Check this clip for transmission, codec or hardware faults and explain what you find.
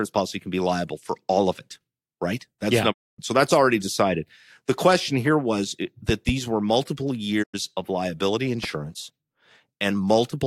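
Two kinds of fault are audible: digital broadcast dropouts and loud pops.

Digital broadcast dropouts occur from 2.91 to 3.20 s and from 7.42 to 7.56 s. The receiver lost valid frames and muted. The speech fades out over 20 ms and goes silent. The gaps fit runs of lost 32 ms frames.

Loud pops occur as a double pop from 6.09 to 6.31 s, peaking well above the speech, and as a single pop from 8.64 to 8.66 s. They were likely caused by voltage spikes from a plug or switch. The speech carries on underneath.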